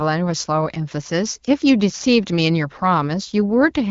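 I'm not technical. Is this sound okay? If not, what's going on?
Yes, the signal is in sound technical shape: it's speech carried by the AMR wideband (HD Voice) phone codec, which keeps it clear but leaves nothing above about 7 kHz, so it lacks the top-end airiness of a full-range recording.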